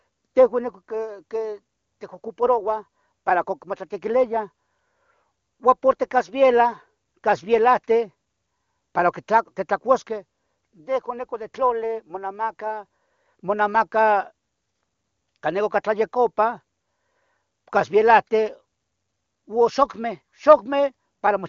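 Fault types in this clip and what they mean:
No faults can be heard.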